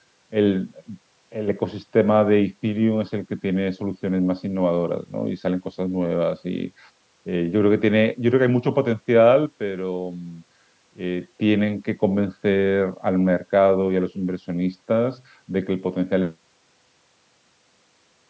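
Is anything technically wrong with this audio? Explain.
Yes. The speech twice falls abruptly by about 6 dB and then snaps back: briefly from 1.33 to 1.48 s, and for longer from 9.46 to 11.21 s. This is likely one channel drops out. When one side of the stereo signal is lost and the pair is summed to mono, the shared content loses half its contribution. A fade or automatic gain dip would ramp gradually by varying amounts. Here the step is instant, uniform and the same size both times. The sound stops at 8 kHz and has little deep bass because of the call microphone processing.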